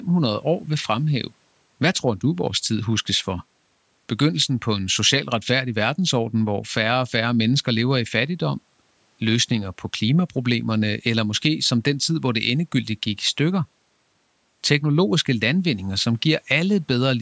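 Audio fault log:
No faults are heard in this speech clip. It has passed through a call's microphone processing, which leaves the lowest bass thinned and nothing above 8 kHz.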